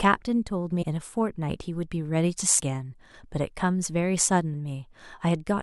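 Compressed frames skipped at 0.82 to 0.84 s and again at 2.58 to 2.60 s: the speech jumps ahead by roughly 400 ms, then roughly 300 ms, as runs of frames go unplayed. The skipped runs are made of 23.2 ms frames.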